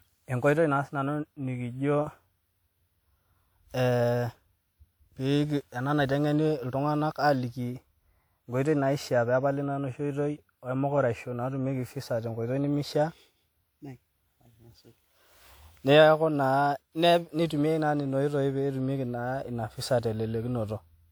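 Generation loss runs throughout the speech, most likely from the audio being decoded and re-encoded around seven times with a lossy codec, and the character fits repeated WMA passes at around 128 kbit/s. Each pass quantises the signal again on a shifted frame grid, so noise and spectral gaps pile up. The result is swirly, hollow and smeared, with consonant attacks blurred, though content extends up to a 20.1 kHz ceiling.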